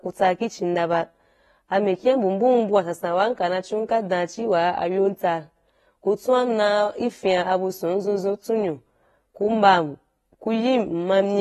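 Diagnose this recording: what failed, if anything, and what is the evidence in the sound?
The speech is dull and smeared, with fizzy warble on sibilants and nothing above 12.5 kHz. The codec stage is the likely cause: AAC compression, consistent with about 32 kbps, where coarse quantisation starves bands. A spectrogram shows a hard ceiling at 12.5 kHz with patchy holes beneath.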